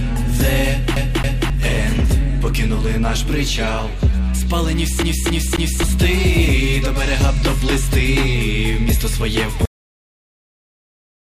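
At 0.96 s and again at 5.02 s you get the CD stuck on one turn: a scratch keeps kicking the laser back, so a 0.27 s chunk stutters two and then three times. From 9.65 s to the end there's an audio dropout to silence, dead silence with no room tone, most likely from a lost input or stray mute.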